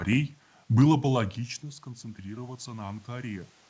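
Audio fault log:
1.15–3.69 s, automatic gain rising: after "было бы" the input fell by about 17 dB as the talker moved back, so the gain control judged it too quiet and raised its gain gradually, making voice and room noise swell together until the end.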